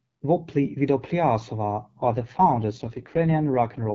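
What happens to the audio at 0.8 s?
Nothing goes wrong at 0.8 s: the speech passes through intact there, carried by the AMR wideband (HD Voice) codec at 12.65 kbit/s with only light coding damage.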